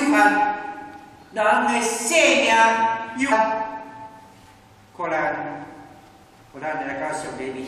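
At 3.31 s there is a brief blip from damaged data in a compressed stream: a corrupted stretch of the encoded file leaves the decoder misreading frames and losing sync. On a spectrogram it shows as a thin broadband vertical streak, and on the waveform as a short discontinuity.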